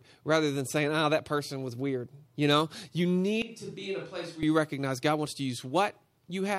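Speech, with a switch to a distant microphone from 3.42 to 4.43 s, after "know you" and before "you recognize". It abruptly turns hollow and roomy, roughly 10 dB quieter, with thinner bass and room noise around 30 dB below the speech, likely because the close mic dropped out. The waveform shows a sudden step down, and the spectrogram shows weaker lows and smeared reverberant tails.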